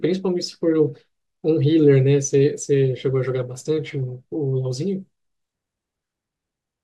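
Nothing here trips any alarms: no dropouts, glitches, clicks or other technical faults turn up anywhere in the recording.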